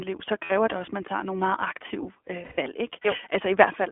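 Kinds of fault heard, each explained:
iLBC codec: the speech sounds slightly rough and synthetic, and is confined to about 250 Hz–3.4 kHz. It comes from a narrowband VoIP codec coding each 20 ms frame independently.
lost iLBC frames: a held, buzzy vowel fills 0.44–0.52 s before "det også at man" and 2.44–2.59 s, as the decoder repeats the last pitch cycle over missing packets.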